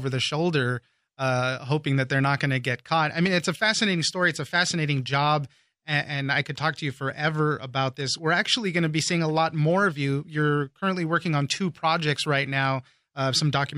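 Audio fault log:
3.26–3.28 s, loud pop: a single sharp pop lands between "to get caught I" and "it's a fascinating story", peaking around 10 dB above the speech, which continues underneath without a break. It sounds like a brief voltage pulse or step added to the signal, most likely from a plug, switch, static discharge or a driver glitch, whose edges the downstream circuitry shapes into a short thump about 20 ms long.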